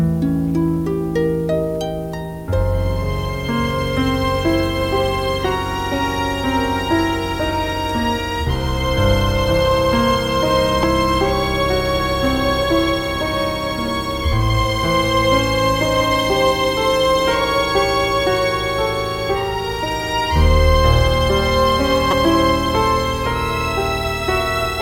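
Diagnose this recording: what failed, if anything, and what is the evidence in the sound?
The failure sits at the codec stage: damaged data in a compressed stream. Two brief glitches break the audio, a very short one at 10.83 s and a longer one from 22.10 to 22.13 s, about 36 ms. At each point some of the encoded bytes no longer parse correctly, so the decoder misreads or discards those frames, loses frame sync and scans forward for the next valid header, producing a short disruption instead of the intended sound.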